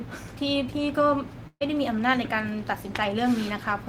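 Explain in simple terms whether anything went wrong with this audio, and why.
A burst of packet loss hit between 1.47 and 1.63 s, when about 140 ms of audio data arrived too late or not at all. The receiver stretched the last sound, let it fade into a brief silence, then skipped ahead, so that piece of speech is gone.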